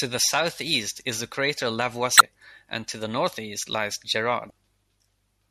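A brief glitch cuts into the speech from 2.17 to 2.21 s, between "southeast is the crater" and "and to the northeast". This is damaged data in a compressed stream: corrupted bytes made the decoder misread those frames and lose sync until it found the next valid frame header.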